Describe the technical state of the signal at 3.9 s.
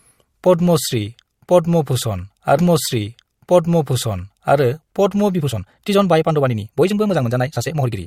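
At 3.9 s the speech is replaying material already heard: from 2.57 s to 4.57 s a two-second stretch plays a second time after a small blip at the jump back. This is a stream segment repeated, with the player fetching or queuing the same segment twice.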